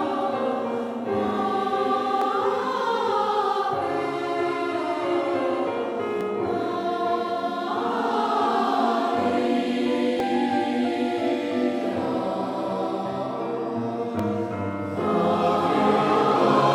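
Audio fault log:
2.22 s, 6.21 s, 10.20 s, 14.19 s: audio missing between chunks. Tiny skips of a few milliseconds recur every 4 s, likely lost while one chunk closes and the next opens.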